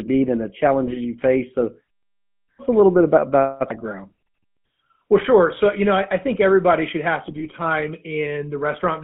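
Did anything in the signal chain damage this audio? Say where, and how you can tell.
Yes. GSM full-rate codec damage runs through the whole clip, so the fault sits at the codec stage. The speech is confined to a telephone band of about 150 Hz to 3.4 kHz, and a plainly audible buzzy, gravelly roughness rides on the voice, which fits a 13 kbps full-rate coder. It rebuilds the voice from a vocal-tract filter fed by a sparse, regularly spaced pulse train, and that coarse excitation produces the grit.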